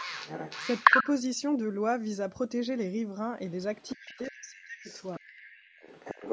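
From the start to 1.07 s a second voice sits over the talker, roughly 5 dB louder. This is the other side's voice leaking through, likely from loudspeaker echo the echo canceller failed to remove. Between 0.87 and 1.06 s the talker dips briefly by only a few decibels. That is speech suppressed in double talk, likely because the canceller turned everything down while both sides spoke.

From 3.49 s to the end the faint echo returns, far below the talker, around 20 dB down. Against it the talker's speech is suppressed in double talk much more deeply. From 3.95 to 4.9 s it drops by roughly 40 dB in pieces, close to cutting out. A short dip of similar depth follows at 5.19 to 5.26 s.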